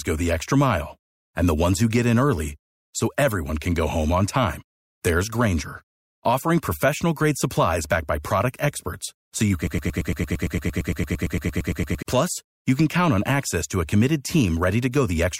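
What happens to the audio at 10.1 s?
A broken-record loop runs from 9.67 to 12.03 s: a 114 ms fragment repeats 21 times back to back, likely from a stalled player, and the speech meant for that span is lost.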